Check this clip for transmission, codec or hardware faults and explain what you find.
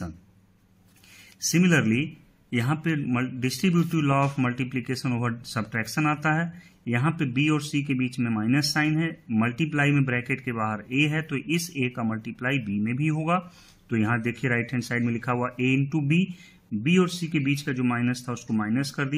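Nothing wrong can be heard anywhere in this recording.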